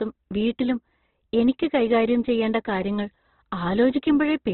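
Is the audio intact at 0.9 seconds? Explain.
No, at 0.9 seconds the speech is still under the Opus compression that runs through the whole clip. Nothing survives above about 4.1 kHz, and the tone is grainy and rough, likely from CELT-mode encoding starved of bits, which fits roughly 12 kbps.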